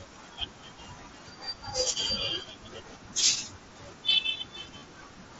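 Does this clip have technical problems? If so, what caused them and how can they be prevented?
Yes. Concealed Bluetooth headset packet loss at 4.78 to 4.82 s: about 40 ms of headset audio never arrived, and the phone filled the gap by repeating recent waveform, giving a brief buzzy held tone before a slight warble on recovery. Keeping the headset close and reducing 2.4 GHz interference prevents it.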